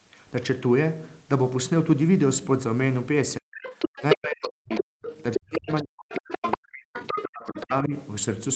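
A speech recording on a call line, with nothing heard above 8 kHz. The talker's speech is suppressed in double talk three times: 3.4 to 3.56 s, 3.95 to 6.98 s, and 7.31 to 7.94 s. It drops steeply, by as much as about 40 dB. The likely cause is an echo canceller that cannot separate the talker from the loudspeaker echo, so it turns both down. The other side's voice is also leaking through, from 3.55 to 6.57 s and from 6.94 to 7.63 s. It sits only about 5 dB, then about 10 dB, below the speech. This is likely leftover loudspeaker echo that the canceller failed to remove.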